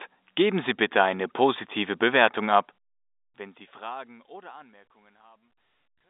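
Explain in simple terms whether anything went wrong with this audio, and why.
Nothing went wrong: the level eases down gently from around two and a half seconds to the end, as an editor would fade it, and the sound has the narrow, boxy tone of an ordinary landline call, which is how such a line is meant to sound.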